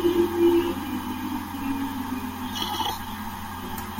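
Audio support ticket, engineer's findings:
Listened through the speech recording and nothing stood out as a fault worth flagging.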